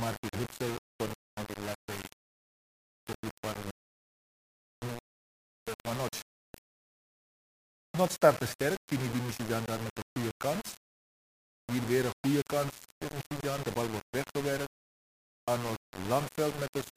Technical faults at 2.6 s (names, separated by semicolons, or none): low bit depth without dither